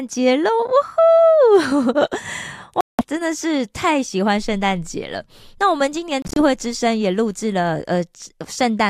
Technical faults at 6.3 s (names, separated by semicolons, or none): Bluetooth dropout